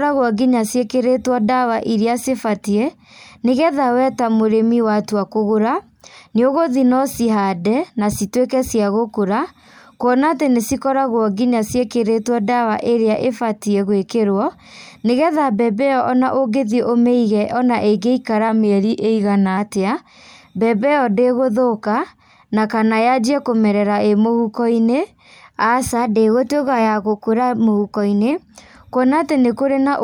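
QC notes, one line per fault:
18.49–19.58 s drift correction step: speech runs about 5.7% slow and a semitone flat, then snaps back, likely clock sync jumping the playback rate to refill its buffer.
25.91–28.31 s drift correction step: the reverse, about 5.7% fast and roughly 96 cents sharp for 2.4 s, likely the same sync draining its buffer before returning to pitch.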